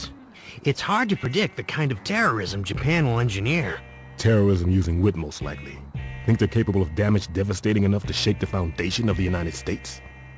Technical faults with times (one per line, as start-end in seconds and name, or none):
none